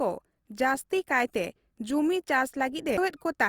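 Sample clock jitter runs through the whole speech clip. The converter's clock wanders by about 1.5 microseconds. Each sample lands slightly off time. The error sits roughly 40 dB below the signal. It sounds like a faint hiss that thickens on loud, bright sounds and disappears in pauses.

At 2.97 s there is a CD skip. A disturbance threw the laser onto a different turn of the disc's spiral. The player muted for just a few milliseconds, then resumed from another point. It is heard as a brief tick followed by an abrupt jump in the sound.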